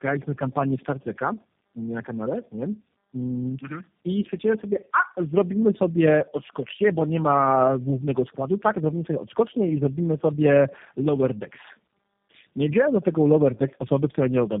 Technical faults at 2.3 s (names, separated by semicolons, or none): tandem speech coding